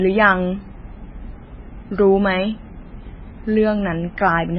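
Throughout the speech, the treble stops dead near 5.5 kHz and the remaining sound swirls and warbles, with s sounds turned metallic and chirpy. That is heavy damage, likely from MP3 compression at a very low bitrate, around 16 kbps. A plain low-pass filter would dull the sound without this watery flicker.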